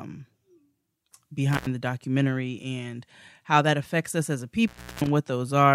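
The speech drops out with crackle at its edges at 1.53 s for 94 ms and at 4.68 s for 233 ms: intermittent contact, a loose cable or plug briefly opening the line.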